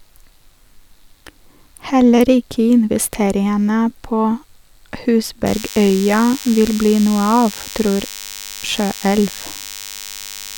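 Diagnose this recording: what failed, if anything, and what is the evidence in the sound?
A thin, steady buzz appears at 5.46 s and runs to the end of the speech at 10.57 s. It sits well below the talker, on the order of 15 dB down, and is rich in harmonics above a 100 Hz fundamental. This is DECT cordless phone buzz entering at the analogue stage: a nearby handset or base transmits a short radio burst every 10 ms, and the audio circuitry rectifies those bursts into a 100 Hz pulse train.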